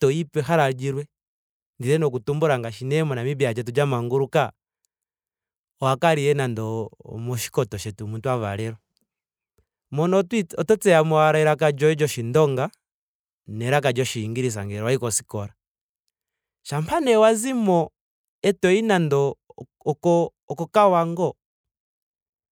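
Nothing in this speech recording stood out as a technical problem on listening.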